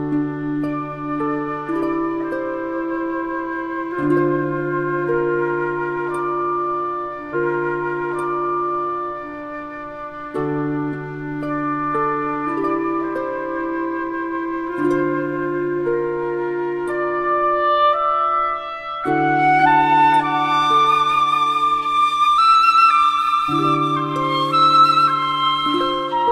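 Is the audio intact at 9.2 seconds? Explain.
No. At 9.2 seconds the sound is inside a stream segment repeated fault that runs from 7.29 to 9.34 s. The player fetched or queued the same chunk of the stream twice. So about 2.04 seconds of material plays a second time. A small blip marks the jump back to the start of that chunk. What you hear at 9.2 s is a replay, not new audio.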